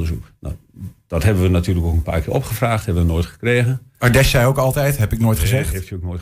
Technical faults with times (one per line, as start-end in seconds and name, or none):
none